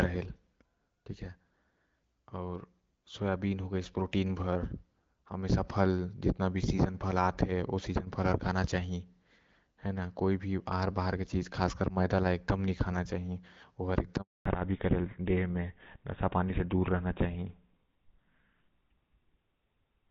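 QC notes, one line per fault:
14.21 to 14.45 s, handover gap: the call hopped between networks and no speech frames got through for about 240 ms, so the speech drops out almost instantly and sits in dead silence until the new link picks up. Whatever was said in that window is gone.
14.45 s to the end, fallback to narrowband: right after the handover the call lands on GSM full rate at 13 kbit/s instead of HD Voice, so nothing above 4 kHz survives. The speech turns duller and rougher than the wideband stretch before it, which sounds clear with only light coding damage.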